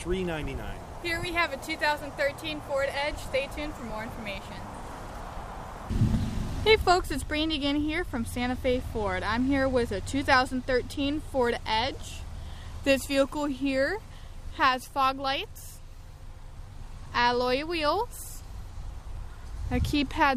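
Nothing in the audio stood out as a technical problem on listening.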